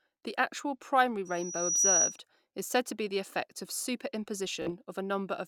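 A piercing 5.8 kHz tone swells over roughly half a second from 1.25 to 2.18 s, ending well above the speech: loudspeaker feedback squeal, the microphone re-amplifying its own loudspeaker. From 4.62 to 4.71 s a brief buzzing repeat stands in for about 46 ms of lost audio, a Bluetooth stutter that fits a few dropped packets.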